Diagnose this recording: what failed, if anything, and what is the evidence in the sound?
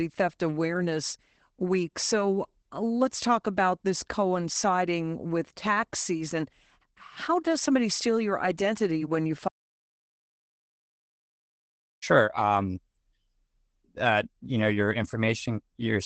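At the codec stage, Opus voice compression ran at a low bitrate, and the damage is plainly audible throughout the speech. The linear-prediction coder limits the band, with nothing above 8.8 kHz, and codes the excitation coarsely, leaving a muffled, hoarse, slightly robotic sound consistent with about 12 kbps wideband SILK.

An audio dropout to silence follows "your identity when you", from 9.48 s to 12.02 s, about 2.5 s. The input was likely lost at the device or link while the recorder went on writing zeros. The speech cuts off mid-flow, the gap holds no room tone, and the speech from that stretch is missing.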